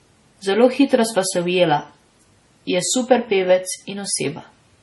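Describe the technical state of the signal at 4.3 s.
At 4.3 s the speech carries heavy MP3 compression damage, present throughout the clip: nothing remains above 11.5 kHz, and sibilants sound watery and chirpy. This is likely a starved encoder, consistent with about 32 kbps, truncating treble and zeroing weak spectral lines frame by frame.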